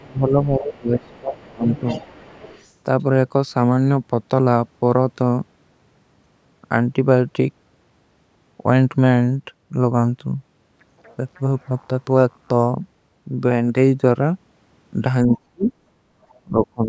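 From 0.0 to 2.03 s the talker's speech dips and breaks up, at its deepest by about 25 dB, for roughly 1.5 s in total. This is speech suppressed in double talk, likely because the echo canceller heard both sides at once and turned everything down. Unlike a dropout or a gate, the cuts follow the overlap, not pauses. From 0.73 to 2.71 s a second voice sits underneath at about 20 dB below the speech: the other side's voice leaking through, likely loudspeaker echo the canceller failed to remove. It is an added voice rather than a loss of the talker. The same pair returns briefly, with suppression from 15.27 to 15.72 s reaching about 40 dB over roughly 150 ms, and faint leakage from 15.33 to 15.72 s at about 25 dB down. From 16.01 to 16.13 s the room background drops by about 6 dB for around 100 ms and then recovers. This is background gated by the echo canceller, a brief clamp on ambience during playback. 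Another faint scrap of leakage, about 35 dB down, appears from 16.29 to 16.67 s, and from 16.43 s to the end the speech is pulled down again by about 25 dB over roughly 300 ms. The call's microphone processing limits the top end to 8 kHz.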